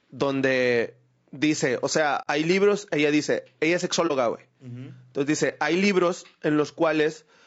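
Throughout the speech there is a rough, grainy texture, with noise filling the gaps between the voice's harmonics and a thin, somewhat synthetic top band. This is plainly audible codec damage, likely from low-delay AAC compression (AAC-ELD) at around 32 kbps. At this low bitrate the coder cannot spend enough bits on every frequency line, so the voice loses its clean harmonic structure. It is not a steady hiss beneath it, which is what separates it from added background noise.

At 2.22 to 2.28 s, between "donde dice o sea" and "hay libros ella dice", the audio drops out for about 60 ms, which fits two lost frames. This is AAC frame loss with muting: the decoder replaced the missing spectrum with silence. Because the overlapping windows taper the sound out and back in, the gap has soft edges. That sets it apart from a hard sample dropout, which would tick at both ends.

At 4.07 to 4.11 s, just after "ella dice ella es", a shorter muted gap of about 30 ms (one lost frame) has the same gentle fade.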